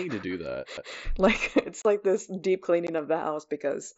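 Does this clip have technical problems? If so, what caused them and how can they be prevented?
Yes. There is a CD skip at 0.77 s, just after "to do". The laser was jolted or hit a flaw and jumped to another turn of the disc's spiral. The player muted very briefly, for a few milliseconds, and resumed from a different point. You hear this as a tiny tick and a sudden jump in the sound. To prevent it, clean or replace the damaged disc, isolate the player from knocks, and rip with error-checking software instead of playing live.

There are two cases of unconcealed Bluetooth headset packet loss. The first runs from 1.82 to 1.85 s, between "like it's" and "like this deep". It leaves a 30 ms hole, which fits about four lost packets. The second is at 2.87 s, between "it's like this deep" and "of the". It leaves a 15 ms gap, which points to two packets. In both cases the link between headset and phone dropped packets. 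Silence or an idle pattern filled in for them, so you hear short holes with abrupt edges. The headset's mSBC wideband codec still comes through around the gaps. To prevent this, keep the headset close to the phone with a clear line of sight, and reduce 2.4 GHz interference.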